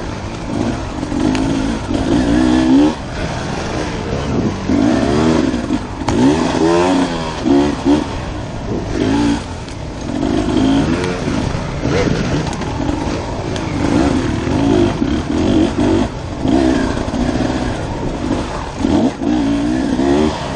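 No technical faults can be heard anywhere in the audio. At no point does anything in the signal chain audibly break down or misbehave.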